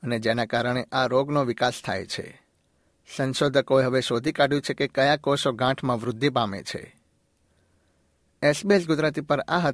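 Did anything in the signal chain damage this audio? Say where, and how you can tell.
Yes: aliasing from an unfiltered sample-rate conversion throughout. Sibilants sound gritty, and the spectrogram shows mirrored energy, roughly 30 dB down, folding at 11 kHz, fitting a 22 kHz rate.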